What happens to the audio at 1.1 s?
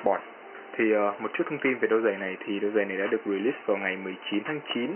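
Nothing goes wrong at 1.1 s; the audio plays through that moment intact, with no dropout, click or other fault.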